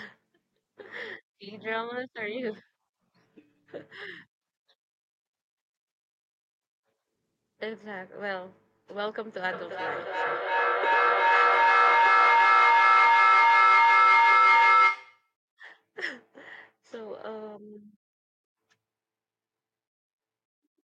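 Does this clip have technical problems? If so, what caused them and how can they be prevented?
Yes. From 9.44 to 15.35 s there is feedback echo between two devices: the speech returns roughly every third of a second and builds to about 14 dB above the original instead of fading, which separates it from a single room echo. Muting or removing the second device in the room prevents it.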